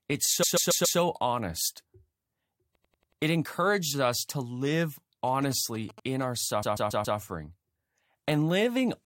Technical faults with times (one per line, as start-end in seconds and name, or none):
0.42-0.98 repeated frames
2.74-3.21 repeated frames
5.27-6.23 GSM signalling bursts
6.62-7.18 repeated frames